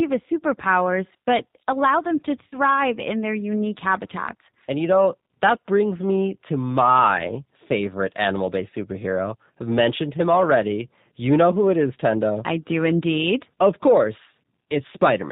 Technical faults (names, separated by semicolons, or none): G.729 codec; VoIP packet loss concealed by the speech codec